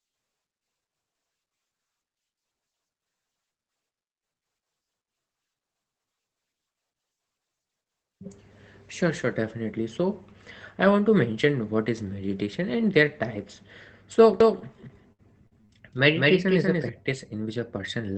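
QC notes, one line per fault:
14.41–16.89 s, doubled audio track: a second full-band copy of the sound runs about a fifth of a second behind at roughly equal loudness, starting and stopping abruptly. Unlike an echo, it has no decay or room colour, which points to a likely second, slower capture path.
14.61 s, lost packet rebuilt from error correction: one 20 ms stretch turns briefly rougher and noisier, but without any dropout. The next packet carried a low-bitrate copy that the decoder played instead, which distinguishes it from concealment that stretches old sound. The 8 kHz Opus bandwidth leaves no extra top end to dip.
15.13–15.71 s, repeated packet loss (robotic sound): four holes in quick succession, the longest 60 ms, each patched by extending the previous sound. About 28% of the span is filled this way. The repeated patching sounds choppy, unlike the single gapless rebuild at 14.61 s.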